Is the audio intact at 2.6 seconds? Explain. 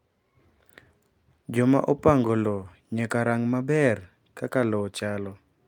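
Yes, the speech at 2.6 seconds is intact, with no audible fault at that moment.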